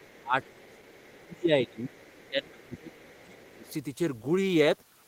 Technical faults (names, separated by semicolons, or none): speech suppressed in double talk; other side's voice leaking through